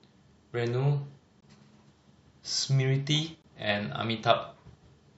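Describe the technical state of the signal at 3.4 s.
A gap between stream segments opens from 3.42 to 3.44 s in the speech: the time stamps of adjacent segments leave about 21 ms uncovered, consistent with 2-second segments, and the player fills it with silence, producing a hard-edged hole with no sound actually lost.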